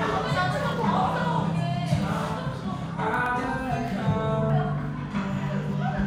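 From 0.17 s to 5.73 s a click recurs every 0.62 s, about ten in all, a pattern likely caused by clock drift buffer slips: two clocks differing by roughly 300 ppm, dropping or repeating a few samples each time. Each shows as a waveform discontinuity and a thin vertical spectrogram line.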